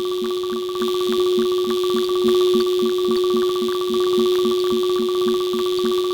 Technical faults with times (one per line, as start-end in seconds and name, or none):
none